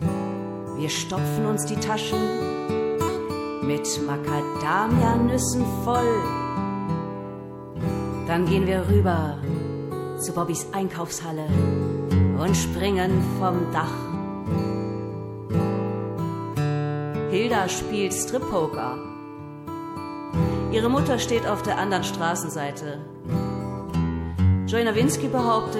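Nothing goes wrong anywhere in the recording, so there's no technical fault to point to here.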